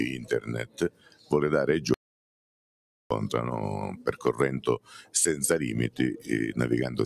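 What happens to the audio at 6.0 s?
At 6.0 s, as across the whole clip, a noise suppressor applied to music or sounds is treating sustained tones and decay as noise. Onsets pass, but held sound sinks by roughly 15 dB, giving fluttery, thinning tails. Unlike compressor pumping, the drop follows steadiness rather than loudness.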